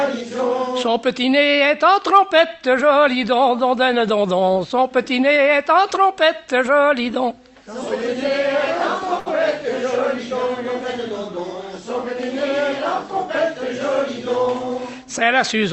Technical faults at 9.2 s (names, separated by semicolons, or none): short stall from a late packet